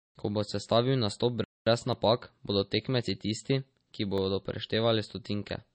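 Throughout the speech, the sound has a watery, swirling quality with smeared consonant onsets, and nothing is present above 8.4 kHz. This is likely MP3 compression at a low bitrate, around 32 kbps: short of bits, the encoder cut the treble at a fixed point and dropped weaker frequency lines, which flicker on and off from frame to frame. A spectrogram shows a flat ceiling at 8.4 kHz and speckled, patchy energy below it.

From 1.44 to 1.66 s, just after "bo sestavil nastop", the speech halts for about 220 ms and then resumes. This playback stall is likely the player running out of data or being blocked, so the output went silent until it caught up. On the waveform it appears as a flat stretch cutting across the speech, and the spectrogram shows a clean vertical gap across all frequencies.

At 1.93 s, a block of digital silence lasting 0.73 ms drops the signal abruptly to silence and back, consistent with a 32-sample buffer left unfilled. 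At 4.18 s, just after "tisti ki", a 0.34 ms block of digital silence does the same. Each is heard as a tick or dip. Zoomed in, the waveform shows a tiny flat run with hard edges, and the spectrogram shows a thin broadband vertical line.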